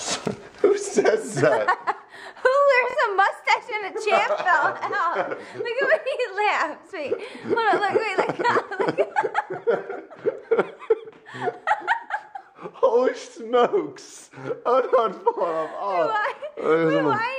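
The audio has one Bluetooth stutter, from 2.90 to 2.97 s. A short slice repeats as a brief buzz while the receiver replays its last buffer. About 46 ms of sound goes missing, which fits two lost packets. Playback then resumes further on.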